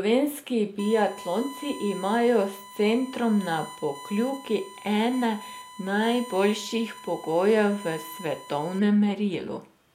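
From 0.79 s to 8.79 s a steady 1 kHz tone sits under the speech. This is USB whine. The bus draws current in 1 ms frames, and that ripple leaks into the audio through power or ground. It holds a fixed pitch, roughly 20 dB below the speech.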